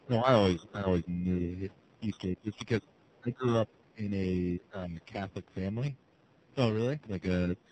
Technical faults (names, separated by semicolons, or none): AMR narrowband mobile codec; periodic clock jitter; speech suppressed in double talk